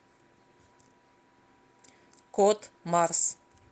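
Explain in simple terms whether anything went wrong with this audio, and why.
Nothing went wrong with this speech recording. It went through an ordinary internet call connection, so you can hear the usual call quality, with the very highest tones above about 8 kHz trimmed away.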